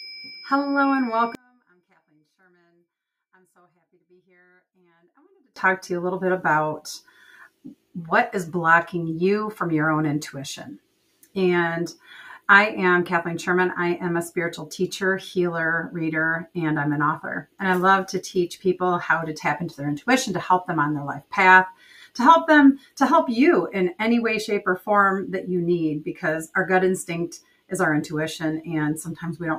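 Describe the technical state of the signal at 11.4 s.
At 11.4 s the signal is intact, with no dropout, distortion, glitch or other audible fault at that point.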